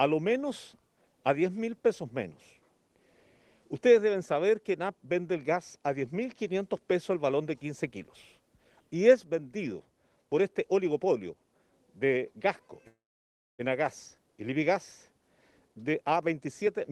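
At 12.87 s there's a call audio freeze lasting until 13.61 s. Packets were likely held up and the jitter buffer ran dry, so the last sound gets stretched into a brief fading buzz or hiss, then about 0.63 s of silence, before the audio picks up right where it stopped with nothing lost. From 15.68 s to 16.91 s comes a jitter buffer speed-up. With delayed audio piling up, the receiver trimmed short pitch-period slices over and over, dropping roughly 0.4 s in total, so the sound runs about 129% fast at unchanged pitch and comes across hurried.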